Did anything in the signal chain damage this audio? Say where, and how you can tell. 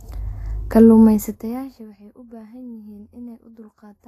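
Yes. Vorbis compression damages the speech throughout the clip, at the codec stage. Nothing is present above 14.1 kHz, and the treble that remains sounds hissy and grainy. Consonant onsets are smeared, and the voiced tones have a roughened edge. This is likely a low-rate Vorbis encode, which fits a bitrate around 31 kbps. At that rate the encoder cuts the band and quantises the high residue so coarsely that fine detail turns into noise-like texture of similar energy.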